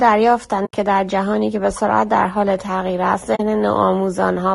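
Throughout, the speech sounds rough and grainy, with noise filling the gaps between harmonics, which points to low-delay AAC compression, likely AAC-ELD at a bitrate fitting 32 kbps, rather than plain broadband noise. At 0.65–0.74 s and again at 3.35–3.40 s, AAC frame loss with muting leaves holes of 80 ms and 40 ms, consistent with four and then two lost frames. The decoder silenced the missing spectrum, so the sound fades out and back in, unlike a hard-cut dropout.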